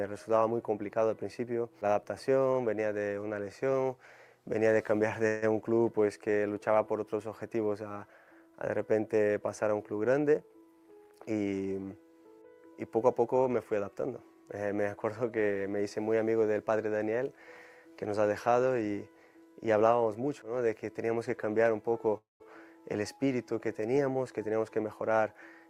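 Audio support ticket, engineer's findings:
Call audio freeze at 5.27 s and 22.18 s: sound stalls into a fading buzz, about 150 ms then 220 ms (second drops to silence), then resumes where it left off. Likely late packets draining the jitter buffer.

Jitter buffer speed-up, 10.62–11.73 s and 24.22–25.18 s: runs about 11–12% fast at unchanged pitch, sounds rushed. Receiver trimming pitch-period chunks to burn off built-up delay, roughly 150 ms then 100 ms.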